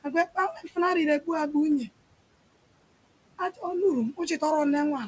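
Speech recorded over a wideband call, with room noise sitting about 18 dB under the talker and nothing above 8 kHz, which fits a G.722-style path. Throughout, there are noise suppressor artifacts: the background gets pulled down about 21 dB between phrases and then swells back under the speech. There are also two spots of speech cut by the noise suppressor, where it mistook quiet speech for noise. From 0.55 to 0.77 s, around a fifth of a second is pushed down as much as about 14 dB, and from 3.38 to 3.63 s, roughly a tenth of a second drops about 13 dB, so those bits sound swallowed.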